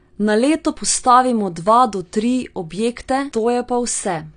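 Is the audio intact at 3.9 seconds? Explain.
No, at 3.9 seconds, like the rest of the speech, the sound is dull and plainly smeared, with nothing above about 9.8 kHz and a warbly fizz on sibilants. That's likely AAC compression at a low bitrate, which fits around 32 kbps.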